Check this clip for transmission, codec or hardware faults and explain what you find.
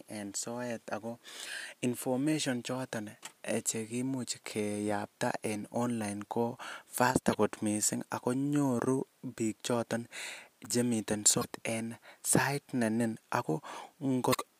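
There's one fault here, recurring three times in the speech: damaged data in the compressed stream. It hits at 7.32–7.35 s, right after "en online ko faster" and before "kot missing ako nyoru"; at 11.38–11.45 s, just before "en sait"; and at 14.30–14.35 s. Each time, corrupted bytes make the decoder misread frames, lose sync and hunt for the next header, so you get a brief glitch in the audio.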